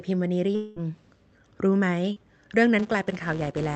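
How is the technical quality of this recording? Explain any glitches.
The recording has three distinct glitches: a long gap early on, a brief smear near the middle, and a buzz that runs to the end.

From 0.55 to 0.79 s the speech stops and is replaced by a continuation of the last sound, a buzz or hiss that decays without ever reaching full silence before normal speech resumes. About 200 ms of real audio is missing, filled with roughly 206 ms of synthetic sound. The likely cause is a long network dropout, where the receiver stretched the final fragment it had to bridge the hole and then carried on without the lost section.

Between 2.13 and 2.20 s there is a short wobble, a blurred instant where the speech loses its definition and any brief consonant there could disappear. This is short concealed packet loss. Around 40 ms of audio never arrived in time, so the decoder invented about 34 ms by extending the preceding sound's pitch or noise character, then crossfaded back into the genuine signal.

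From 2.79 s to the end, a 200 Hz buzz rides on the speech, growing louder and softer with it. This is a filter restarted on every block. The filter discards its memory at each block boundary and begins again from silence, producing a small click every block. At a steady repetition of 200 per second those clicks fuse into a pitched buzz that follows the signal's level.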